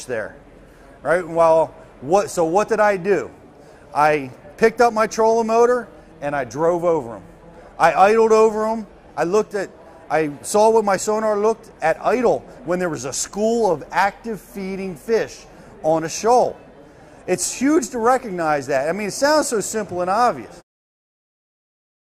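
No technical faults can be heard in the signal, and near the end the level eases down in an ordinary smooth fade-out that begins around 20.5 s and is complete by 20.63 s.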